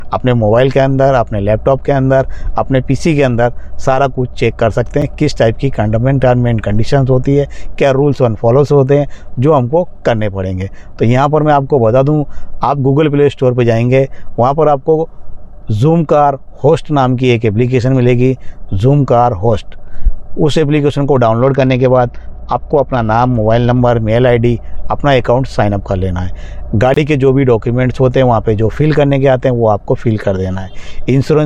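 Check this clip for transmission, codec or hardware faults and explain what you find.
Three faults appear, of two kinds.

Blocks of digital silence at 5.02 s and 26.94 to 26.96 s: the output buffer likely went unfilled, leaving zeros. The first, 5.8 ms, ticks; the second, 23 ms, is a brief hole, fitting 256- and 1024-sample blocks.

Bluetooth SBC bit pool drop from 21.4 to 23.8 s: congestion starved the encoder, which points to a bit pool falling from 28 to 9, about 78 kbps. The treble dulls and gritty noise rises.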